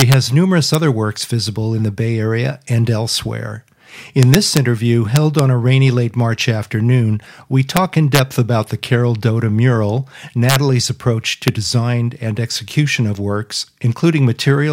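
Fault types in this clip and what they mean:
Integer overflow at 0.00–0.14, 0.74, 4.23–4.57, 5.16–5.39, 7.77, 8.15–8.19, 10.49–10.56 and 11.48 s: speech peaks pushed up to about 4 dB past the integer limit wrap to the opposite sign instead of being held, giving violent cracks far harsher than clipping.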